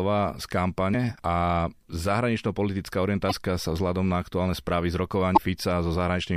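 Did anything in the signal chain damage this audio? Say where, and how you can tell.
Yes, at the codec stage: damaged data in a compressed stream. Brief glitches occur at 0.90–0.95 s, 3.28–3.33 s and 5.35–5.39 s, where corrupt bytes made the decoder misread frames and hunt for sync. A spectrogram shows broadband smears cutting across the speech harmonics, and the waveform shows abrupt discontinuities.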